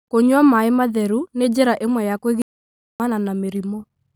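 At 2.42 s the speech just cuts out and the output sits in dead silence until about 3.00 s, roughly 580 ms of nothing, before carrying on. That's a playback stall: the sound stops mid-flow for a clearly noticeable gap rather than a click or dropout of a few milliseconds. The likely cause is the player running dry on data, or its audio thread getting blocked, so it had nothing to send until it recovered.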